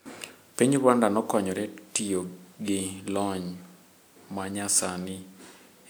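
No technical faults can be heard anywhere in the speech recording; the signal stays steady and intact throughout.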